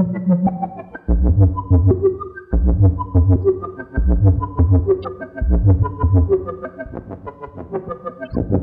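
Two short bursts in this recording of everyday sound are corrupt frames decoded: from 5.03 to 5.06 s, and from 8.26 to 8.32 s. Each is a brief spell of misplaced energy. The first is the louder, peaking around -20 dBFS, while the second is fainter at about -35 dBFS. The lengths fit a couple of damaged frames and then a few. Flipped bits scrambled the gains or spectral codes, and the decoder played the frames regardless.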